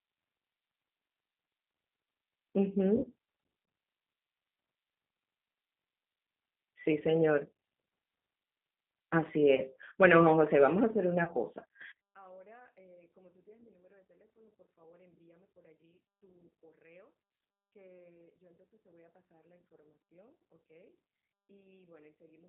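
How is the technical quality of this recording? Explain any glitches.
Poor: the whole recording has the narrow, rough sound of a low-bitrate phone line, with three brief dropouts and a near-collapse in level for its second half.

Throughout, the speech sounds thin, slightly synthetic and gritty, confined to about 200 Hz to 3.6 kHz. This is G.729 codec damage: an 8 kbit/s VoIP codec rebuilding speech from a small pulse-and-filter model.

At 2.97–3.07 s, 9.55–9.62 s and 11.24–11.31 s, speech smears into a fading buzzy tone or coloured noise. This is VoIP packet loss concealed by the speech codec. The decoder extrapolates across roughly 60 ms of missing audio in the first gap and 30 ms in the others, and needs a moment to recover.

From 11.92 s to the end, the speech drops by about 35 dB to a faint remnant. The likely cause is one channel inverted, with the centred voice cancelling when the stereo channels are summed to mono.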